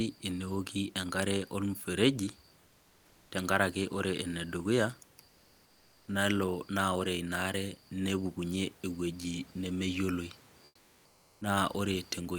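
Comfort noise in place of the background appears in this speech clip at 2.65–3.31 s, 5.25–6.07 s and 10.65–11.41 s, where the real room noise gives way to a flat, featureless hiss for 0.66, 0.82 and 0.76 s. The likely cause is discontinuous transmission, pointing to Opus DTX: the sender goes quiet in pauses and the receiver synthesises stand-in noise, here about 3 dB quieter, level, and about 2 dB quieter.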